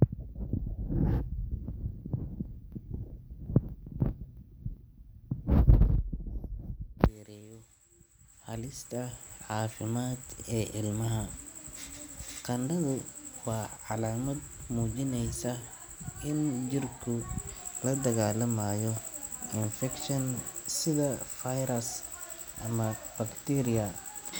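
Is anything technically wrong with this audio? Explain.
No, nothing technically wrong can be heard anywhere in this speech recording.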